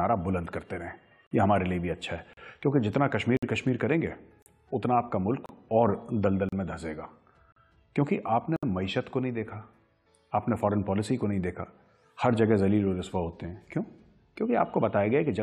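Timestamps on consecutive 1.0 s stream segments fail to meet, so the player fills each join with silence. This gap between stream segments cuts hard-edged holes of 31 to 65 ms into the sound, about once a second, at 1.27, 2.33, 3.37, 4.42, 5.46, 6.49, 7.52 and 8.56 s.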